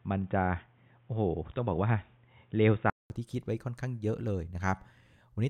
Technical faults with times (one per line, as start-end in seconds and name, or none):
0.00-3.10 input switched to a poorer device